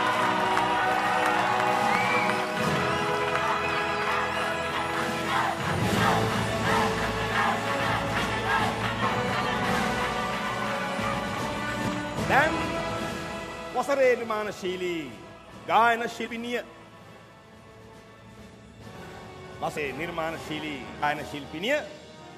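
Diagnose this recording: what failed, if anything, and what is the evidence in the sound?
Codec or storage stage: compressed frames skipped. Smeared blips and jumps of roughly 100 to 200 ms occur at 4.76, 9.01, 11.87–11.89, 14.19, 16.26–16.28, 19.76–19.78 and 21.02 s. Whole 23.2 ms frames are dropped, and overlapping frames blur each join.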